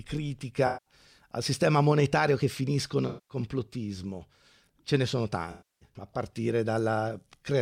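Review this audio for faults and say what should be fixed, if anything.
AAC frame loss with concealment occurs three times. Runs of AAC frames go missing, about 190, 210 and 300 ms of audio, and the decoder patches each gap from the last good spectrum. This leaves smeared, noisy, phasey stretches at 0.66–0.94 s (just before "al sistema monetario che"), 3.08–3.37 s (after "sistema monetario che finiscono") and 5.51–5.89 s (after "ne sono"). To prevent this, carry the stream over a more reliable transport or add error protection and retransmission so frames arrive intact.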